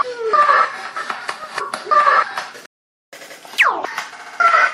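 It's a clip of sounds. At 2.66 s the audio cuts out mid-flow and stays silent until 3.13 s, a playback stall of about 470 ms, likely the player running dry of data or having its thread blocked before it recovered. From 3.13 s right through to the end you get catch-up at higher speed: the player resamples its backlog to run 1.15 times faster, so everything moves quicker and sits roughly two semitones higher, and it never settles back to normal speed before the clip finishes.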